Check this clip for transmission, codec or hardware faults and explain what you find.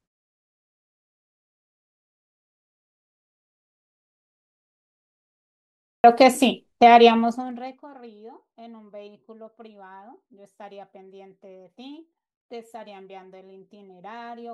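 Two faults are audible: a clipped start after a pause, and zipper noise during a level change.

At 5.55 s, after about 5.5 s of silence from the top of the clip, the speech comes in abruptly, with roughly 0.49 s missing up to 6.04 s. The output device apparently dozed off during the silence and needed time to wake and lock before passing sound through, so the opening of the utterance is swallowed.

From 7.07 to 7.91 s the level drops by something like 25 dB, and that drop is carried out in 1 dB steps, around 30 per second, with nothing smoothing the jumps between them. Each step puts a tiny discontinuity into the waveform, so a fine ticking or zipping rides on top of the speech while the level falls. Here the fade itself is granular and audibly stepped.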